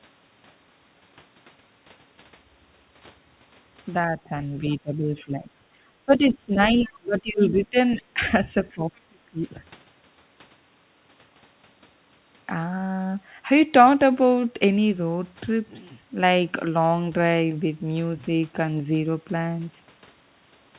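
At 4.11 to 4.32 s the speech dips slightly, by about 5 dB. This is speech suppressed in double talk. The likely cause is an echo canceller that could not tell the near talker from the loudspeaker echo while both sides spoke. It turned everything down. At 4.70 to 4.75 s a faint scrap of the other side's voice leaks through, about 30 dB below the speech. The canceller likely left this residue of the loudspeaker sound in the microphone signal. The suppression returns harder from 4.78 to 5.65 s, 6.06 to 6.58 s and 6.74 to 7.77 s. Each drop reaches about 20 dB. The speech sinks. Inside that last stretch, at 6.75 to 6.86 s, the other side leaks through again, about 25 dB down, short. Another 20 dB dip follows at 7.95 to 8.21 s. The deepest cut comes at 8.74 to 9.43 s, at about 35 dB. Throughout, nothing sounds above 4 kHz. That fits a G.711 mu-law call path at 64 kbps.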